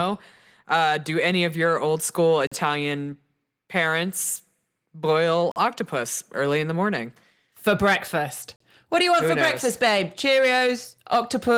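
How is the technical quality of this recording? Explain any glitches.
The speech is interrupted by three short silences, evenly spaced, with light Opus voice-compression colouring heard throughout.

Gap between chunks, at 2.47, 5.52 and 8.56 s: each hole lasts 44 ms and recurs about every 3 seconds, pointing to audio delivered in 3-second chunks with silence left at each join. Unlike a dropout, nothing is lost. The sound stops abruptly and resumes exactly where it left off.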